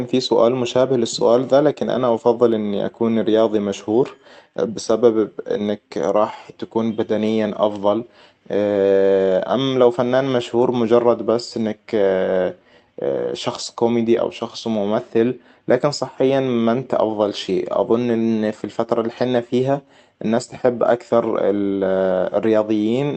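Speech carried over a WebRTC call path, its spectrum topping out near 8 kHz as an Opus call codec at that bandwidth would leave it, with no technical fault to be heard anywhere in the clip.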